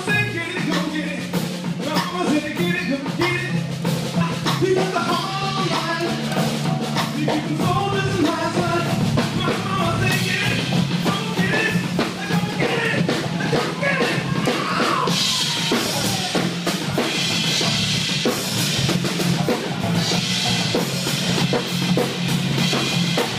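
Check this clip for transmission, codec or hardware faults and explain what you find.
One hardware fault is present: periodic USB or driver dropouts from 8.53 to 13.03 s. Every 0.5 s, roughly a millisecond of audio goes missing and is filled with silence. A recurring task stalls the bus or driver. This gives evenly spaced ticks while sound plays.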